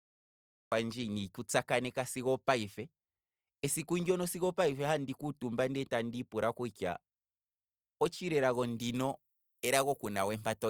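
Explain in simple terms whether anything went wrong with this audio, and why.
Cut-off start, at 0.72 s: the recording began late, so there is digital silence and then the speech jumps in mid-sound, with no natural lead-in, just before "ina ndiku tsa kaneka".

Pre-emphasis left on, from 8.53 s to the end: the treble was boosted, FM-broadcast style, and never turned back down, so the speech sounds thin, harsh and hissy on "s" sounds.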